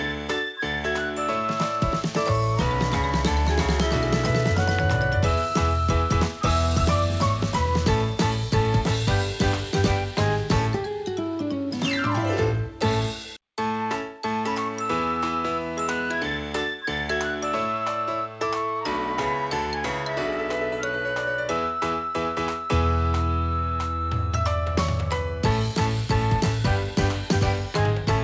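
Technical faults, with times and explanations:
No faults found; the audio has nothing above 8 kHz, as expected from a normally working G.722 call path.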